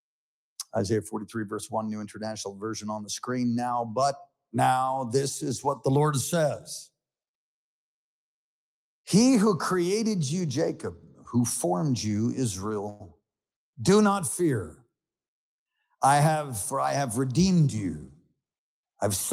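At 12.89 s the audio stops moving forward and the last instant is held as a brief buzzing continuation that fades before the sound resumes at 13.02 s. About 106 ms of filler has been inserted and nothing has been lost. This is a call audio freeze, likely caused by packets stalling in transit until the jitter buffer ran dry. The receiver then resumed from where it left off, which adds that 106 ms to the delay. From 15.29 s to 16.87 s the audio runs hurried, about 7% faster (107% speed) at unchanged pitch. This is a jitter buffer speed-up. With more audio queued than the buffer's target, the receiver trimmed many tiny pitch-period slices in succession, removing roughly a tenth of a second to pull the delay back down.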